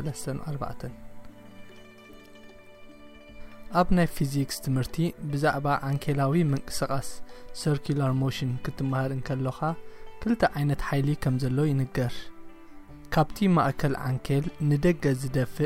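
Nothing goes wrong anywhere in this clip, so there's no fault to point out from beginning to end.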